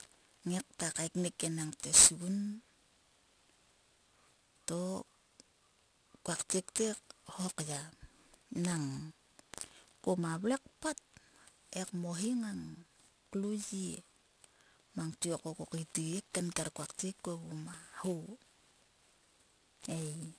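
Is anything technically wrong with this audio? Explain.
Yes, there is aliasing throughout the speech. The sample rate was reduced without an anti-alias filter first, which fits a drop from 48 kHz to 22 kHz, so content above 11 kHz folds back down as false tones. The folded energy sits not far below the signal, making sibilants gritty and metallic, with the spectrum running hard up to 11 kHz.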